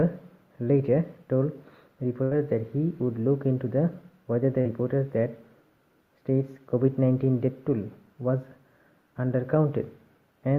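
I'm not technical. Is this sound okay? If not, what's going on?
No. At 2.23 to 2.33 s, a burst of packet loss: about 80 ms of audio never arrived, so the receiver stretched and faded the last sound, then jumped ahead. At 4.61 to 4.67 s, short concealed packet loss: about 40 ms went missing, and the patched-in fill gives a brief smear or wobble.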